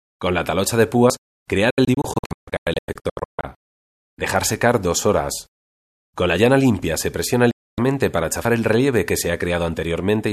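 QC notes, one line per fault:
1.70–3.44 s and 7.51–7.78 s, digital broadcast dropout: the sound snaps to silence within about 3 ms. The first stretch breaks into scattered holes, the longest 144 ms, totalling 984 ms. The second loses a solid 264 ms. The receiver muted on failed frames.
3.55 s and 8.45 s, audio missing between chunks: a brief skip of roughly a twentieth of a second, the two sides butted together. This is likely a gap at a chunk boundary, fitting 2.5 s chunks.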